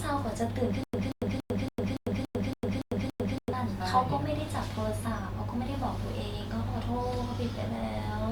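Stutter with silent gaps, 0.84 to 3.53 s: a 183 ms speech fragment repeats nine times, each followed by 100 ms of digital silence, a 283 ms cycle. A stalled stream likely replayed its last fragment at each retry, losing the audio due there.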